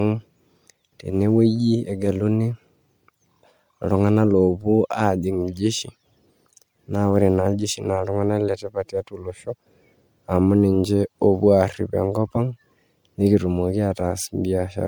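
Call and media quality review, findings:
Swirly, smeared, hollow speech throughout, worse than one encode at the bitrate it suggests (around 96 kbit/s MP3). Generation loss, likely from about four repeated MP3 decode/encode passes on shifting frame grids. Consonant attacks blurred. Spectrogram: holes and speckled noise compounding across bands, energy ending at 20.1 kHz.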